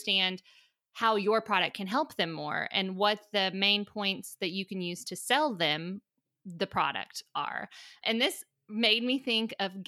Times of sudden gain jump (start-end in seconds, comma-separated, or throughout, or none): none